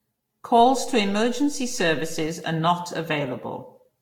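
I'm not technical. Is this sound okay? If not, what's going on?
No. Throughout the speech, the sound is swirly, smeared and hollow, with the starts of sounds blurred. This is generation loss, likely from the recording being compressed and re-saved about five times, each pass adding its own damage.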